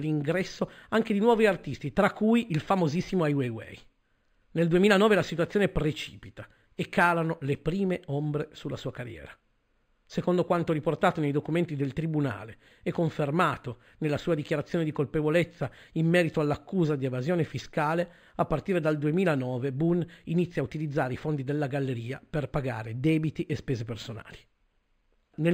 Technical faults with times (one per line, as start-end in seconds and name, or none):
0.00-25.53 imaging from linear upsampling